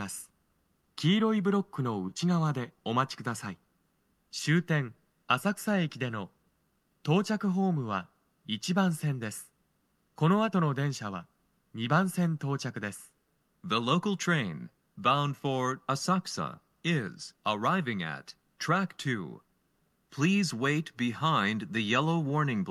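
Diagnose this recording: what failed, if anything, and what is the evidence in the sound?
Nothing failed at any stage: no dropouts, clicks, distortion, level jumps or other defects can be heard anywhere in the recording.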